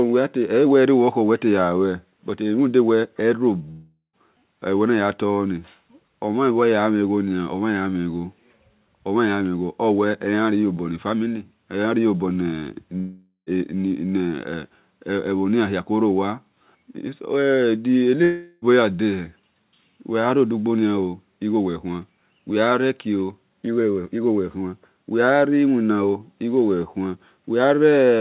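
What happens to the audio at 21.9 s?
Nothing goes wrong at 21.9 s: the speech carries on intact through that moment, with the call path's narrowband sound and nothing above about 4 kHz.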